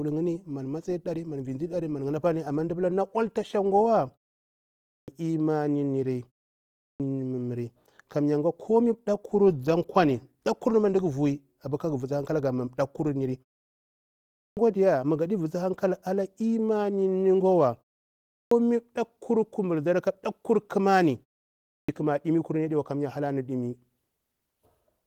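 Clipped starts after a pause at 4.8, 6.67, 14.27, 18.21 and 21.55 s: the sleeping output device wakes late, swallowing about 280 to 330 ms, so speech begins abruptly.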